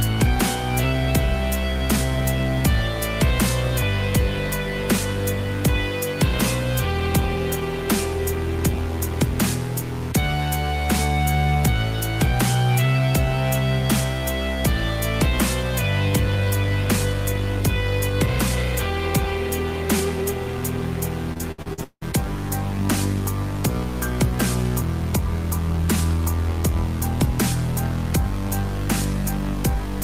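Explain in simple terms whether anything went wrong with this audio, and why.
From 21.33 to 22.03 s there is repeated packet loss (robotic sound): six quick holes, the longest about 0.18 s, each patched by stretching the last bit of sound. About half that stretch is filler, so it turns choppy, unlike a single clean dropout.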